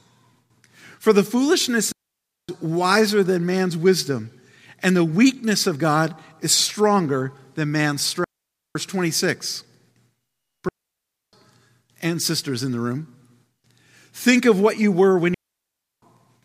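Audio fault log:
1.92–2.49 s, 8.24–8.75 s, 10.69–11.33 s, 15.34–16.02 s: digital wireless dropout. The link loses data and the receiver mutes with a very short fade, leaving clean near-silent holes of 0.51 to 0.68 s with no noise burst on either side. The gaps fall after "the foolishness", after "is stronger than man's", and after "what you were when".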